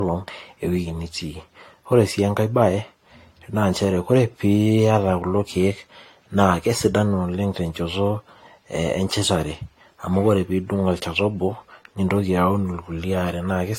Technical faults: generation loss

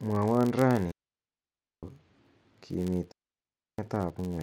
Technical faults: filter restarted on every block; digital wireless dropout

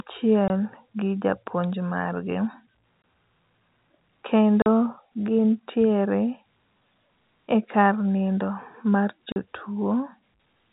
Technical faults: packet loss filled with silence

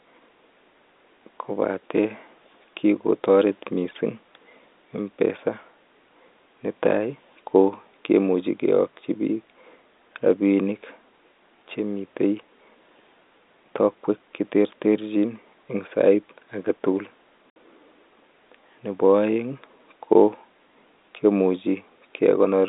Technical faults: packet loss filled with silence

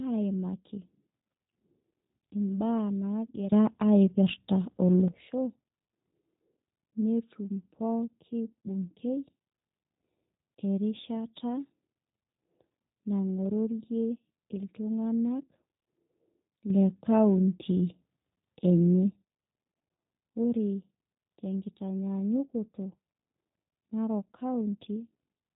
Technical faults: G.729 codec

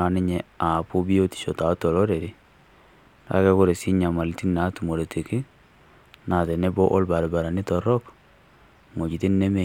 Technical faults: none

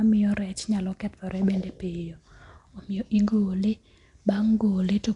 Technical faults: Nellymoser compression

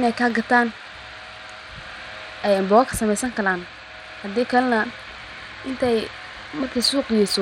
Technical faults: Bluetooth SBC compression

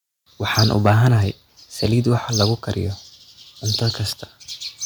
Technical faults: microphone overload

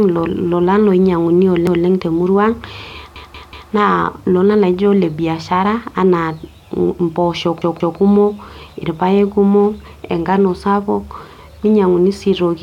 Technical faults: repeated buffer

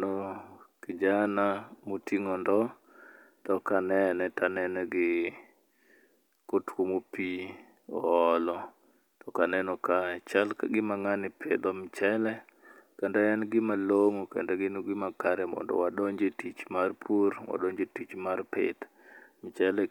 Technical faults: none

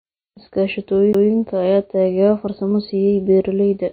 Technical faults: MP3 compression; CD skip

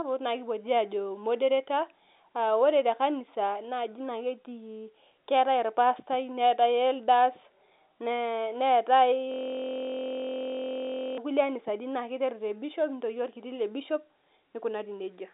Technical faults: system hang loop

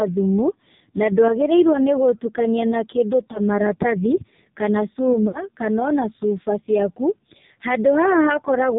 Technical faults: AMR narrowband mobile codec; lost AMR speech frames

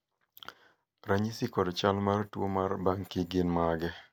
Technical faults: none

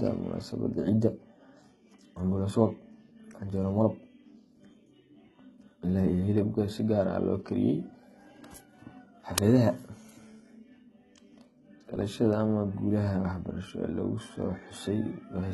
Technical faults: HE-AAC compression; uninitialised buffer

